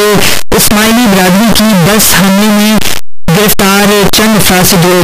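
From start to finish, the sound is a loud, harsh distortion that keeps quiet passages as loud as everything else. The likely cause is a signed and unsigned mix-up in the 8-bit samples, which flips the top bit and throws every zero crossing across the full range.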